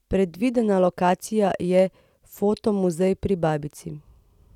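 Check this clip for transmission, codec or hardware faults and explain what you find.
Nothing in the speech signal points to a transmission, codec or hardware fault, so there is nothing here to report or explain.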